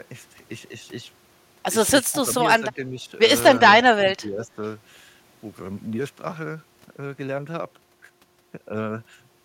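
At 2.11 to 2.38 s, 2.58 to 3.12 s and 3.87 to 4.62 s, the speech sags, deeper each time, from a slight dip to roughly 15 dB. That's likely speech suppressed in double talk, with the echo canceller ducking the talker while the far end spoke.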